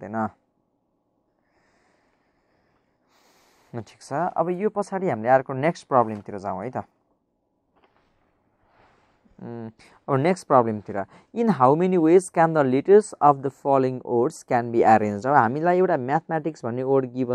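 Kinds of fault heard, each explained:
Dropped samples: Three isolated, sharp clicks occur at 5.23, 9.69 and 11.65 s, each appearing as a thin vertical line across the whole spectrum. The likely cause is the loss of about a single sample each time, so the waveform jumps abruptly to a later value. No sound goes missing, which sets these apart from a dropout, where an audible gap opens, and from crackle, which is dense and continuous rather than sparse.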